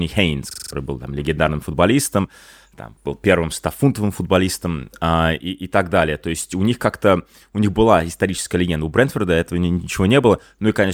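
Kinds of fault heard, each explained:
System hang loop: the playback side stalled while the audio hardware kept replaying its last ring buffer, so a 42.67 ms slice of speech repeats exactly five times from 0.51 to 0.73 s, a rough 23.4 Hz stutter that fits a 2048-sample buffer, with about a fifth of a second of speech lost. On a waveform the same short shape tiles identically; a spectrogram shows a repeated block with vertical seams every 43 ms.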